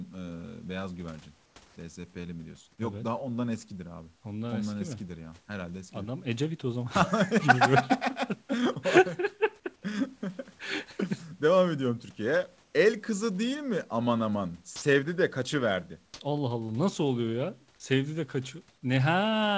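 Comfort noise in place of the background appears at 1.68 s for 80 ms and again at 12.64 s for 100 ms. In these pauses the room background, sitting about 36 to 38 dB below the loudest speech, briefly turns into a smooth, featureless hiss. This is likely discontinuous transmission: the sender stopped sending during the gap and the receiver filled it with synthetic noise shaped to the background. The first patch matches the surrounding level; the second is about 2 dB quieter.

Sound dropped by the voice detector occurs at 14.76 s, where 60 ms of speech vanishes and steady synthetic noise takes its place until the sound resumes. The likely cause is the sender's voice detector judging that stretch as background and halting transmission, so the receiver played comfort noise over a passage that should have been heard. Within the band the call path carries, which holds nothing above 8 kHz, the gap is heard as brief steady noise.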